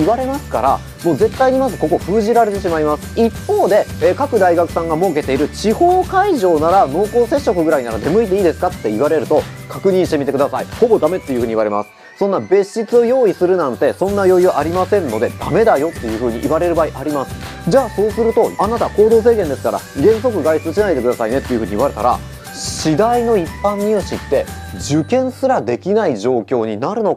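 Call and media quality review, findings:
Nothing to flag here: no dropouts, glitches or other audible faults turned up anywhere in the audio.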